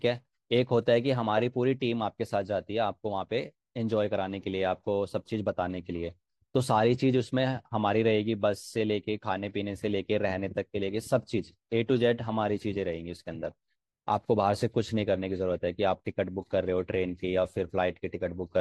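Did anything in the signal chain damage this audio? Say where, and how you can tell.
No, nothing audible in this speech points to damage at any stage of the signal chain.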